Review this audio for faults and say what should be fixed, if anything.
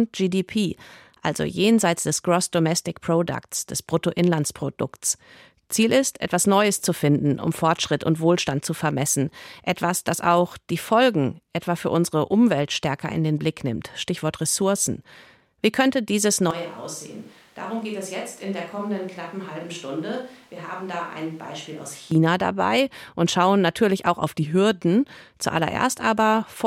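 After "könnte dieses", from 16.51 to 22.12 s, the speech abruptly turns roomy and hollow, thinner in the bass and roughly 10 dB quieter, with room noise rising to about 25 dB below it, until it snaps back before "dabei und schauen natürlich". This is likely a switch to a distant microphone after the close microphone dropped out. Monitor the close microphone and record a backup track of it, so a failure can be caught or replaced instead of falling back to a distant source.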